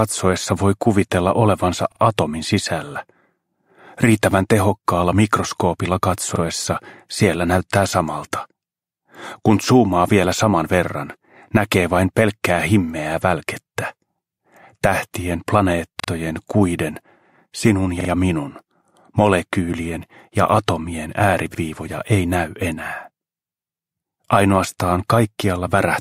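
Repeated buffer stutters occur at 1.92, 6.36, 16.0, 18.0 and 21.55 s. Each time, fresh audio failed to reach the output in time, so the device replayed the last chunk it held. That chunk is about 43 ms long, which fits a 2048-sample buffer. It sounds twice more at 1.92, 16.0 and 18.0 s, and once more at 6.36 and 21.55 s, with a hard join at every repeat. The result is a brief stutter, with essentially nothing dropped from the audio.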